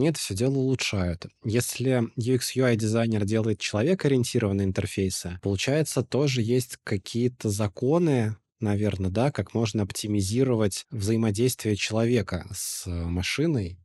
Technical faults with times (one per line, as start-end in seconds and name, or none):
none